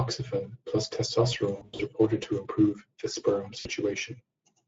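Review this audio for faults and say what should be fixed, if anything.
Speex codec artefacts run through the whole speech clip. The low bit budget starves the excitation, leaving hoarse, noisy speech, which fits roughly 16.8 kbps. Raise the bitrate or use a modern codec.

VoIP packet loss concealed by the speech codec occurs from 1.55 to 1.82 s. About 180 ms of audio is missing across 240 ms, with gaps up to 80 ms. It recurs from 3.59 to 3.69 s, losing 60 ms. The decoder stretches its last frame into a fading buzzy tone or coloured noise. Add jitter buffering and forward error correction.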